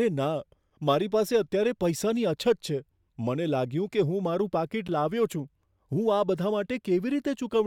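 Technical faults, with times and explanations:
4.88 s, block of digital silence: the speech drops to silence for about 12 ms and snaps straight back with no fade, so you get a tick or dip rather than a real gap. The length fits a 512-sample output buffer that wasn't filled in time.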